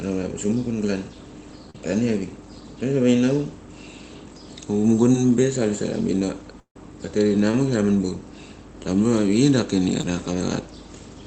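Short concealed packet loss at 1.70 to 1.75 s: about 40 ms of the stream arrived too late for the decoder. The receiver papered over the gap by carrying the preceding sound forward for about 38 ms and then crossfading into the real signal. The result is a brief smeared wobble. A shorter instance at 5.12 to 5.15 s, just before "be sa", loses only about 10 ms.

At 6.60 to 6.76 s there is a long network dropout, likely a stall in delivery. For about 0.16 s the audio is absent. The last sound is stretched into a fading buzz, and roughly the final 100 ms is plain silence. Speech then resumes with that stretch simply gone rather than delayed.

Short concealed packet loss returns at 7.51 to 7.58 s and at 10.01 to 10.04 s. Each loses about 10 ms, bridged with a brief synthetic continuation. At 7.51 s the receiver also trims about 8 ms to regain timing. Throughout, the top end stops near 8 kHz, which fits the Opus call path.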